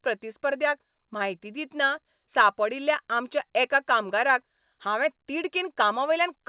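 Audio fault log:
No fault to log for this speech clip.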